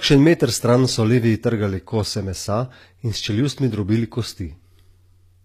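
From start to finish, s sounds turn gritty and lispy, with nothing above 14.9 kHz, likely HE-AAC compression rebuilding treble from copied lower bands at a low bitrate.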